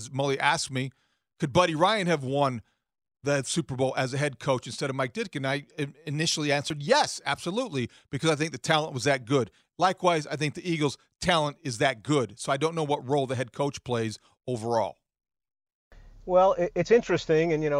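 No technical faults are audible.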